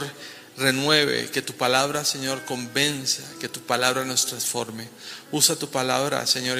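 No technical faults can be heard anywhere in the recording. Nothing in the audio calls for a timestamp or a correction.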